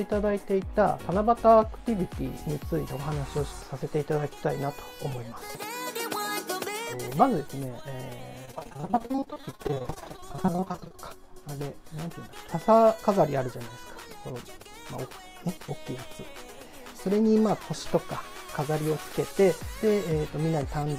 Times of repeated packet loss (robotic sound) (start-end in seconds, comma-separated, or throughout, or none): 8.45-10.97